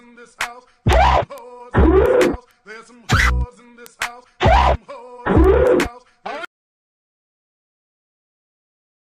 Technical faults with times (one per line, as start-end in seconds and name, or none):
0.25-9.06 word clock ticks